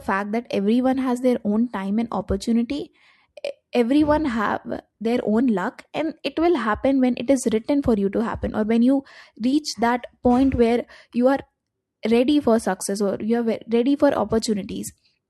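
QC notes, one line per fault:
No faults heard in this speech recording.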